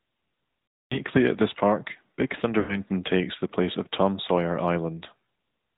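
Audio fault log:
Throughout, AMR narrowband mobile codec: Speech is squeezed through a pulse-driven vocal-tract model at 8 kHz, so it sounds plainly buzzy and synthetic, with a tone that fits a mid AMR-NB mode near 10.2 kbps. A spectrogram shows a hard ceiling at 4 kHz, with nothing above it.
0.70–0.96 s and 2.60–2.78 s, lost AMR speech frames: Corrupted frames made the decoder repeat the last pitch and vocal-tract settings at falling gain. The 240 ms gap drags, then fades to silence. The 80 ms gap smears briefly. Both show a smooth decaying envelope and flattened, repeated harmonics.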